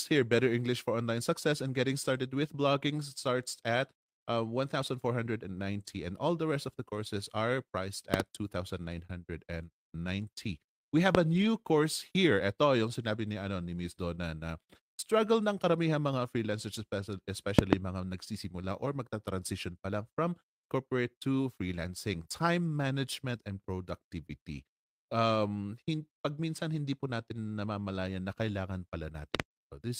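Loud pops at 8.14 to 8.22 s (a double pop) and 11.15 to 11.17 s (a single pop), peaking about 20 to 25 dB above the speech, likely from a voltage pulse such as static or a driver glitch. The sharp thumps land on top of the speech, which continues underneath.

Lost packet rebuilt from error correction at 11.33 to 11.47 s: about 80 ms of speech, pointing to several lost packets, was rebuilt from low-bitrate copies carried in later packets. There's no gap, but the speech turns briefly rougher and noisier.

Further loud pops at 17.59 to 17.75 s and 29.35 to 29.42 s are both double pops, about 25 dB and about 20 dB above the speech respectively.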